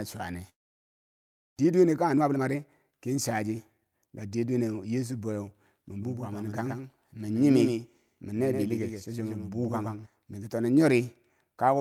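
From 0.49 to 1.61 s the speech cuts out into a short fading buzz, then near-silence, and resumes with about 0.6 s missing, likely a long network dropout. From 1.65 to 4.35 s a jitter buffer speed-up trims pitch-period slices, about half a second overall, so the speech runs hurried at roughly 117% speed, same pitch. Between 5.98 and 10.06 s there's a dry, full-band echo about a tenth of a second behind and about 5 dB quieter, starting and stopping abruptly, likely a doubled audio track.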